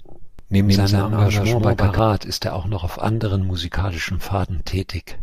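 Speech, with a doubled audio track from 0.39 to 1.99 s: a second full-band copy trails the original by roughly 150 ms at about the same level, with no decay or room colour, and switches on and off abruptly. It is likely a second capture path or a misaligned edit. A waveform shows every syllable repeated a fixed offset later, and a spectrogram shows duplicate harmonic patterns shifted right, starting and stopping with hard edges.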